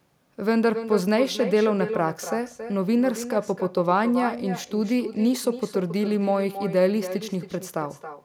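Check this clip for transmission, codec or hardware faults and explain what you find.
One fault runs through the whole speech clip: echo with no canceller. The far end's loudspeaker feeds its microphone, nothing subtracts that path, and each phrase returns roughly a third of a second later, about 11 dB down and thinner. A spectrogram shows every syllable trailed by a fainter, time-shifted duplicate; the waveform shows smaller ghost bursts after each burst.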